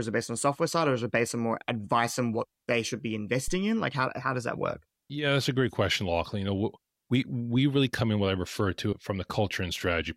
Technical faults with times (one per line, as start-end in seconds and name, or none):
3.48-3.59 phantom power thump